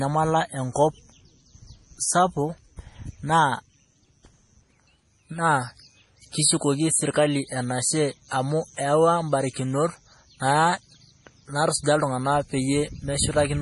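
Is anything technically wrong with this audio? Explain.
Yes. Throughout, the speech is likely heavily squeezed by MP3 compression, which fits a bitrate near 32 kbps: nothing above 11.3 kHz survives, and dropped quiet detail leaves a watery, swirly smear.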